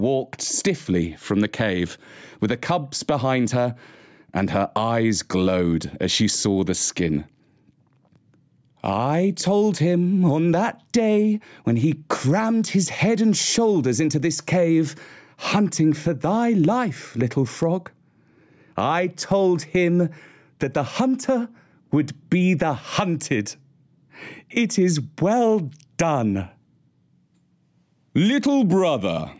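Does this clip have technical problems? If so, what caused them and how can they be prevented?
Yes. Gain pumping throughout: the gain is pulled down about 10 dB under loud speech, likely from excessive microphone gain driving a fast limiter. Prevent it by lowering the input gain so the limiter rarely engages.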